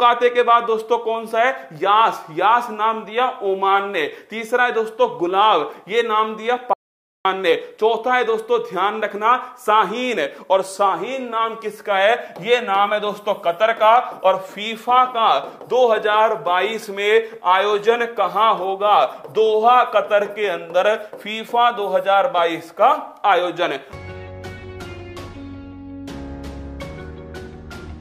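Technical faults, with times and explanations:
6.73–7.25 s, audio dropout to silence: the input feed was likely interrupted while the recording kept writing silence, so the sound cuts off abruptly and returns just as suddenly, leaving about half a second of dead silence with no room tone and nothing recoverable.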